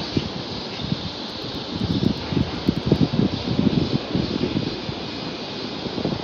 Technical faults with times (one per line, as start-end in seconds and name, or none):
1.30-2.96 periodic USB or driver dropouts
2.77 compressed frames skipped